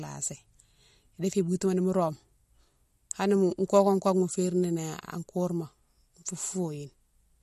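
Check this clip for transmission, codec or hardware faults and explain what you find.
One codec fault runs through the whole clip. Throughout, the speech has nothing above 12.5 kHz, and plainly audible watery swirling on s sounds. This is likely MP3 compression at a low bitrate, consistent with about 48 kbps, where the encoder cuts the treble at a fixed frequency and drops weak frequency lines that flicker from frame to frame.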